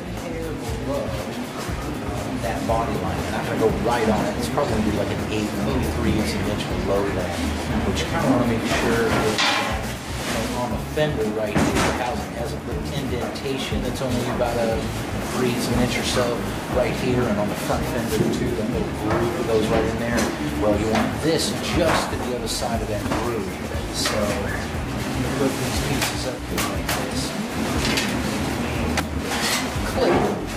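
The audio has frames out of order twice, at 4.86 to 4.97 s and 23.02 to 23.11 s. In each, two adjacent 46.4 ms blocks play swapped, which fits two-frame runs decoded in the wrong order. Each sounds like a brief garbled flutter. No time is lost.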